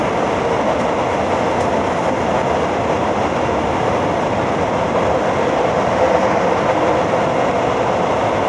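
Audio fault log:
No faults are present in this audio.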